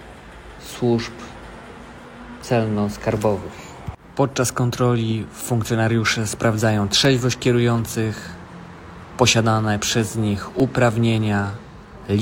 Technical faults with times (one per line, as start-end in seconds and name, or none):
7.05 block of digital silence
8.97-9.02 damaged data in a compressed stream
10.60 block of digital silence